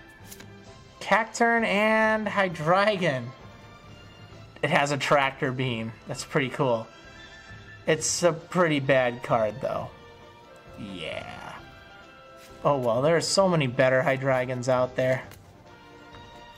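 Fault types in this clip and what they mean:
No fault types are present in this clip, so there is nothing to explain.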